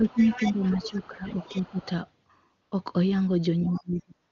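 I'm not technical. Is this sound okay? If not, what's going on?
No. From 0.0 to 0.21 s, 0.37 to 0.61 s, 0.78 to 1.81 s and 3.78 to 4.15 s, the speech dips, and it nearly vanishes in the last stretch. This is likely speech suppressed in double talk, where the echo canceller turns everything down when both sides talk at once.

A second voice comes through from 0.09 to 1.07 s, 1.41 to 1.86 s and 3.74 to 3.78 s. This is likely the other side's voice leaking through: the phone's loudspeaker echo wasn't fully removed from the microphone.

From 2.61 to 2.71 s and from 4.27 s to the end, the background turns into smooth, even hiss. That is AMR comfort noise: the phone sensed silence, stopped sending sound, and the receiver filled the gap with artificial noise.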